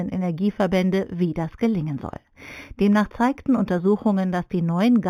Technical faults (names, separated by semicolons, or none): imaging from linear upsampling